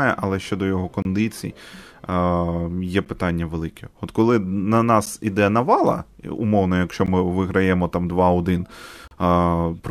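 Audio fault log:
1.02–1.05 s, 3.05–3.06 s, 5.06–5.07 s, 7.06–7.08 s, 9.08–9.11 s: gap between stream segments. Hard-edged silences of 27, 12, 10, 15 and 36 ms cut the speech, the first just after "але щодо його". They recur every 2 s, which fits 2-second segments whose timestamps leave holes that playback fills with silence. No audio is lost.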